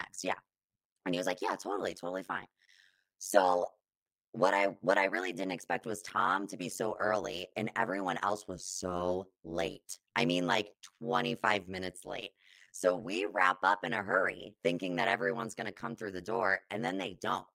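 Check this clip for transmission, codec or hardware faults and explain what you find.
One fault runs through the whole recording. Overlap-add ripple is present from start to finish. The speech was split into windowed frames and rejoined with overlaps that do not sum evenly. Level swings by about 60 dB once per frame, around a hundred times a second. It sounds like a harsh, metallic buzz with extra tones riding on every syllable.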